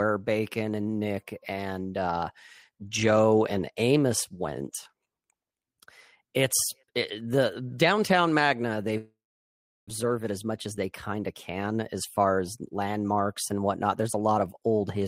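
At 8.97 s the speech breaks off. The last sound is stretched into a buzz or hiss that fades, and then there is silence for about 0.71 s. Speech returns at 9.91 s, with about 0.6 s of it gone for good. This is likely a long network dropout: packets stopped arriving, and the receiver concealed the gap until it had nothing left to play. Playback resumes roughly a third of a second behind.

From 10.03 s to 12.64 s, just before "landmarks and whatnot", the speech runs hurried. It plays at about 110 percent speed, but the pitch does not rise. This is a jitter buffer speed-up. The buffer held more audio than it aims for. The receiver then cut many short pitch-period slices, roughly a third of a second in total, to win back the lag.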